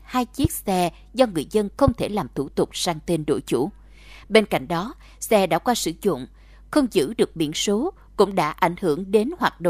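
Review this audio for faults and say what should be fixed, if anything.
Two loud pops sit on top of the speech. The first is at 0.45 to 0.47 s, just before "xe do người dân". The second is at 1.88 to 1.90 s, between "xe do người dân" and "thể làm thủ tục". Each is a single sharp click, well above the speech level. A voltage spike, likely from a connector, switch or static discharge, is the cause. Secure cables and ground the equipment before recording.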